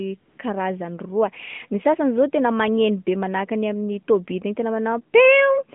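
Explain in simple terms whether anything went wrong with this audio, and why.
Near the start, from 0.20 to 0.38 s, there's a patch of AMR comfort noise, right before "karazany roa ny". The phone took that moment as silence and stopped sending speech, so for about 180 ms the real background is swapped for smooth, steady filler hiss.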